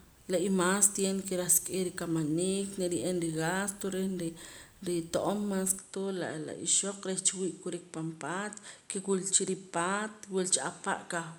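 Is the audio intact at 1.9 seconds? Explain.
Yes, the audio is intact at 1.9 seconds, with no audible fault at that moment.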